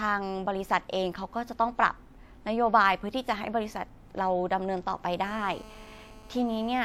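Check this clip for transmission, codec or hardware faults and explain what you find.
One hardware fault: GSM phone buzz from 5.24 s to 6.80 s. A 2G handset close to the recording chain was pulsing its radio transmitter about 217 times a second during a call, and the audio circuitry demodulated those bursts into the signal path. The result is a harsh, raspy 217 Hz buzz rich in harmonics, sitting about 23 dB below the speech, nearly steady through that stretch and bearing no relation to what is being said.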